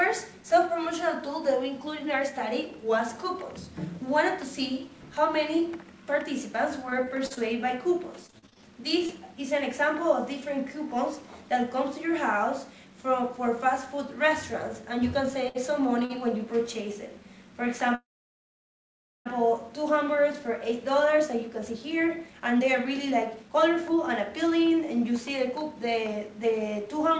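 Between 6.90 and 7.38 s the audio breaks up with repeated packet loss, giving a robotic sound. Four separate holes, the longest 39 ms, are each patched by stretching the previous sound, so about a fifth of that half-second is synthetic fill. The pattern repeats more heavily from 8.26 to 8.59 s, where six holes cover about 42 % of the stretch. About 140 ms of real audio never arrives, and the result is choppy.

At 9.06 to 9.10 s there is a single short concealed packet loss. About 20 ms of audio failed to reach the decoder. The receiver bridged the hole with a continuation of the preceding sound before blending back into the real signal, so it comes across as a brief smear or wobble rather than a clear gap.

Two short stalls from late packets follow, at 15.48 to 15.57 s and 16.05 to 16.12 s. In each case the jitter buffer ran dry and the last sound was held until the packet turned up, 63 ms and then 48 ms. 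Playback resumes from the same point, so nothing is lost, but each spot has a slightly prolonged sound with a faint buzz or dip.

From 17.95 to 19.28 s the audio freezes. The last sound trails off, and about 1.2 s of the 1.3 s interruption is silence. When playback resumes it continues where it stopped, with nothing skipped. This is a call audio freeze, likely caused by packets held up in transit long enough for the jitter buffer to empty completely.

After the freeze the delay has grown by about 1.3 s, and from 20.02 to 27.11 s the receiver works it off with a jitter buffer speed-up. Short pitch-period-sized pieces are cut out over and over, so the audio plays at about 111 % speed while keeping its pitch. Roughly 0.7 s is trimmed in total, and the passage sounds hurried. Throughout the clip the call path runs through a G.722 codec, which accounts for the absence of content above 8 kHz.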